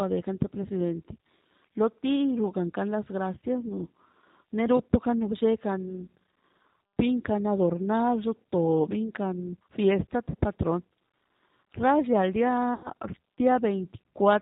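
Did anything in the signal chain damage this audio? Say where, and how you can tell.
Yes, at the codec stage. The whole clip has a G.729 codec sound, the 8 kbit/s G.729A flavour: nothing above 4 kHz, and the speech comes out rough and slightly synthetic because it's rebuilt from a vocal-tract filter, a pitch predictor and a few pulses per frame.

On the network side, there's VoIP packet loss concealed by the speech codec at two spots. From 10.30 to 10.35 s about 40 ms goes missing, which fits two lost packets. From 12.74 to 12.90 s about 100 ms is lost, which fits five. Each gap gets a stretched fill from the decoder reusing its last pitch and filter at falling gain. The voice stays weak briefly after each gap.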